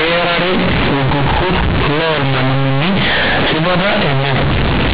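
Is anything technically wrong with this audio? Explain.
Yes. Throughout the clip, the speech was stored as G.711 A-law but is being played back as plain linear 8-bit samples. That is companded audio read as linear. Because the logarithmic codes are never expanded, each change of sign throws the output across about half its range. Quiet passages come out as loud as peaks, and the waveform is badly bent. The result is very loud, buzzy distortion, with strong noise filling the pauses.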